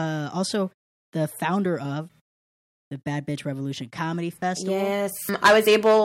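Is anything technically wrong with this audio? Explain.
No, nothing technically wrong turns up anywhere in this speech clip, so there's nothing here that needs fixing.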